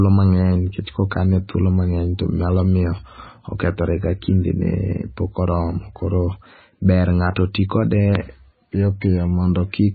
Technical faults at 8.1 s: MP3 compression

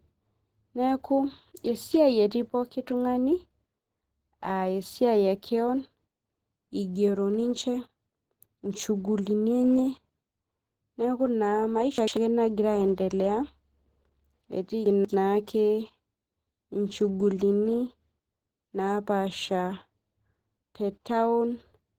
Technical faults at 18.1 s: Opus compression

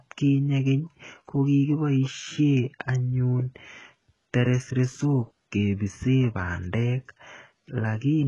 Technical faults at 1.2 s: HE-AAC compression

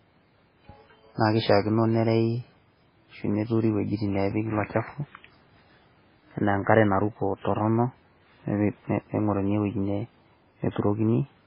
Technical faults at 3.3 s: MP3 compression

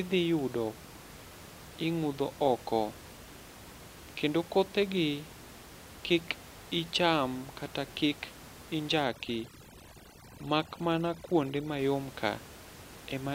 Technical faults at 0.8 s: none

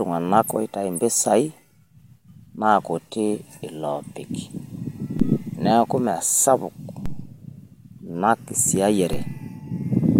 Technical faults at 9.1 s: DC step

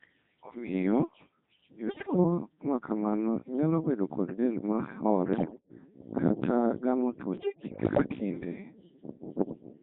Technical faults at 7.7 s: Codec 2 vocoder; bit errors on digital voice radio

